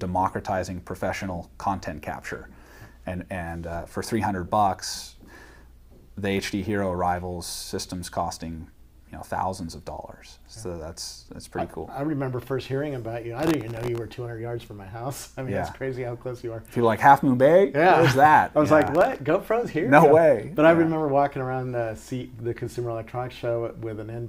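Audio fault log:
13.40–13.98 s and 18.82–19.19 s, processor overload crackle: the processor falls behind and misses a rapid string of buffer deadlines, the first time for more than half a second and the second time for a shorter stretch with about half as many misses. Each buffer is well under a millisecond long. Each missed slot replays a scrap of old audio with hard edges, and these pile up into a gritty tearing over the sound that stops once the load eases.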